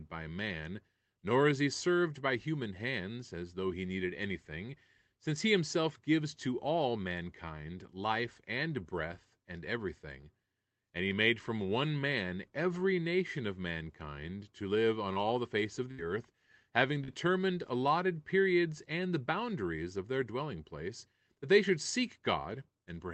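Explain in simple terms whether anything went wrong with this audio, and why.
Short concealed packet loss occurs twice: at 15.13 to 15.17 s, between "mankind to live on" and "the face of", and at 17.04 to 17.10 s, between "earth having" and "allotted periods and the". Pieces of roughly 20 and 40 ms arrived too late. The receiver bridged each gap by stretching the preceding sound, which leaves a brief smear or wobble.

A burst of packet loss hits at 15.91 to 16.00 s, just after "the face of" and before "earth having". About 60 ms went missing in a row. The receiver held and faded the last sound across the hole, so a short buzz or hiss replaces real audio, and the speech then jumps ahead.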